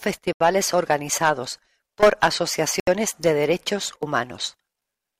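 Twice the speech drops abruptly into dead silence and then carries on: from 0.33 to 0.41 s, a gap of about 79 ms before "organizados por", and from 2.80 to 2.87 s, about 74 ms before "de derechos". This is most likely a Bluetooth stall, where interference delayed the wireless packets, the headphones' small playback buffer emptied, and output paused until the retransmitted audio arrived.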